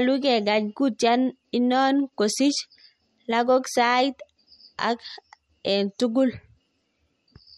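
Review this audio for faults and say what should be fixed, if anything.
MP3 compression at too low a bitrate is the likely cause here, and it runs through the whole speech clip. Starved of bits, the encoder has removed all content above 13.7 kHz and dropped quieter frequency lines that flicker in and out between frames. The damage is plainly audible: a watery, swirling texture on the speech, metallic chirping on s sounds, and softened consonant attacks, which fits a bitrate near 48 kbps. Encoding at a higher bitrate, or keeping a lossless master, would prevent this.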